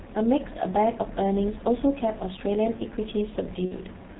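From the start, the whole speech clip carries G.723.1 codec damage, and it is heavy. The codec works in 30 ms frames. Its low rate fits about 6.3 kbit/s. Nothing above 4 kHz gets through, so the speech sounds muffled. The codec's voice model adapts slowly between frames. That leaves a hoarse, rough texture. Consonants lose their edges and blur together.

From 3.65 to 3.74 s comes VoIP packet loss concealed by the speech codec. About 60 ms of audio went missing, which fits two lost 30 ms frames. The decoder filled the gap by repeating its last pitch and filter while turning the gain down. The sound smears into a buzzy tone or coloured noise that fades. Because each frame depends on the previous one, the speech stays weak or distorted for a short while after the gap ends.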